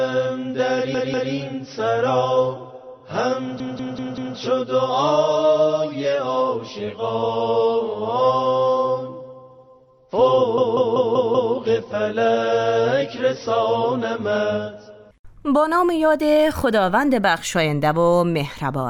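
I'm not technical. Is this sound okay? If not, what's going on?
No. The audio has repeated frames: a short slice, about 0.19 s long, plays again and again. It happens at 0.94 to 1.33 s (two extra plays), 3.60 to 4.37 s (four) and 10.58 to 11.54 s (five). Unlike a dropout or skip, nothing goes missing. The same bit is replayed, so it sounds like a stutter and the audio runs longer than it should.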